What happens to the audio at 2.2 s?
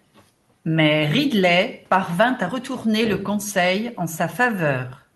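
Nothing goes wrong at 2.2 s: the speech runs on intact, with only the faint room noise well below it and the normal band limit of the Opus call path, which tops out around 12 kHz.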